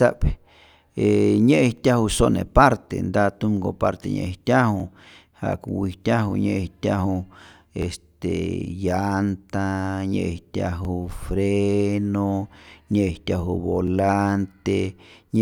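Overlapping chunks stutter the speech at 1.77, 4.8, 7.83, 10.85 and 13.88 s, just before "sone parte nta tumko" the first time. Every 3 s, each block restarts about 25 ms early, replaying that slice.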